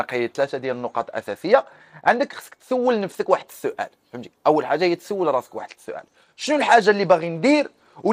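A Bluetooth SBC bit pool drop, from 0.43 to 3.57 s and again from 5.58 s to the end, starves the encoder, consistent with a bit pool falling from 28 to 12 (about 96 kbps), leaving dulled treble and gritty noise.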